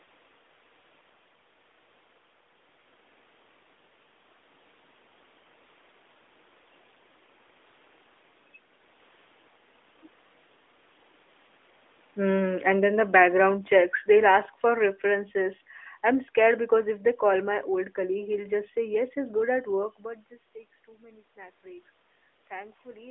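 Speech here, and the one real fault is automatic gain falling: from 12.19 to 15.05 s the level sinks by about 8 dB, background and all, as the gain control decides the input's too hot or too noisy and eases it down. The narrow, light-damage mobile-codec sound, with nothing above about 3.8 kHz, and the level shifts near 2 and 20 s as the talker moves are just the channel and the room.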